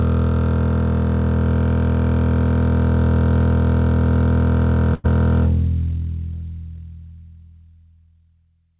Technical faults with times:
4.94-5.06 short stall from a late packet

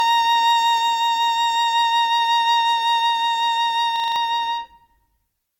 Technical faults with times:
0.00-5.59 generation loss
3.96-4.16 system hang loop

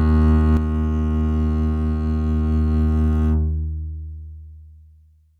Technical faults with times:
0.57-5.40 one channel drops out

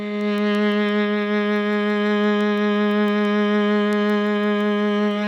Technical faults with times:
0.21-5.11 word clock ticks

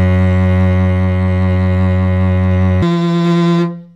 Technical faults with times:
2.82-3.96 section at the wrong speed

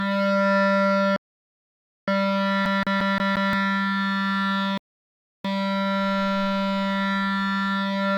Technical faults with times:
1.16-2.08 rebuffering stall
2.66-3.53 CD stuck on one turn
4.78-5.45 rebuffering stall

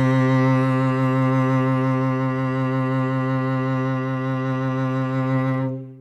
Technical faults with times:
none

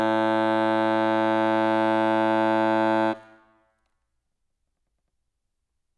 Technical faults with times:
none

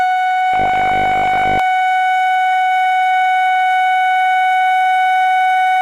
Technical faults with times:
0.54-1.59 robotic sound from repeated short buffers

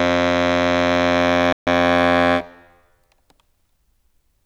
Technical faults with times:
1.53-1.67 playback stall

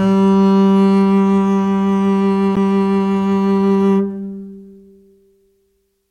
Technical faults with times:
2.56 CD skip

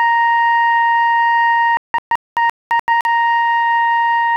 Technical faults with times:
1.77-3.06 digital broadcast dropout

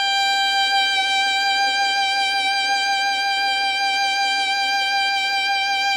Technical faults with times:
none

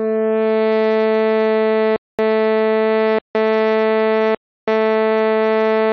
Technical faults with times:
1.96-2.19 rebuffering stall
3.19-3.35 rebuffering stall
4.35-4.68 rebuffering stall

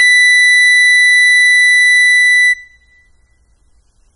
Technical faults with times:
0.00-4.16 AAC compression

